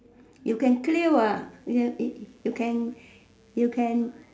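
From 1.43 s to the end of the speech, a mains buzz sits roughly 40 dB below the signal. Sharp switching spikes on a 60 Hz supply, entering twice per cycle, spread harmonics up into the kilohertz range, producing a steady, raspy buzz under everything.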